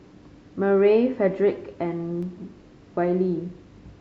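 Between 1.52 and 2.23 s the speech carries four CD scratch ticks. A blemish on the disc wiped out more data than error correction could rebuild, so the player patched or muted the damaged samples on each pass of the spot. Each tick is tiny, the longest under a millisecond, and they fall at an even spacing of about four per second. That steady rhythm separates them from random vinyl crackle or one-off digital glitches.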